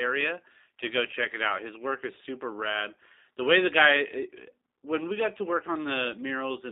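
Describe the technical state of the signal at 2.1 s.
G.729 codec coding is present at 2.1 s, as it is across the whole clip. The speech is rebuilt from a vocal tract filter, a pitch predictor and a few pulses per 10 ms frame, and the sound points to roughly 8 kbit/s. The band runs from 300 Hz to 3.7 kHz, so the voice is thin and muffled, with a clearly audible rough, synthetic texture.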